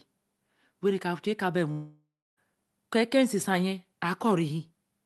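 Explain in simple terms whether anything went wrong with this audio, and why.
From 1.71 s to 2.39 s the speech breaks off. The last sound is stretched into a fading buzz, then there is about 0.3 s of near silence, and the speech resumes with roughly two-thirds of a second simply gone. This is most likely a long network dropout: the audio stopped arriving, so the receiver imitated the last sound to hide the gap, then gave up until the connection returned. The call's Opus codec keeps sound up to about 12 kHz.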